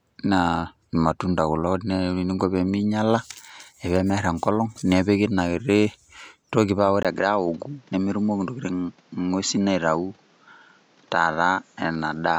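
At 7.03 s, right after "toki paa ore", the speech drops out for about 20 ms and comes back duller and slightly boxy, with little change in level, and stays that way to the end. This is likely an input switched to a poorer device. On a spectrogram, energy above 7.6 kHz vanishes at that point, and a new, steady noise floor appears well below the speech. The waveform shows a brief flat gap at the switch.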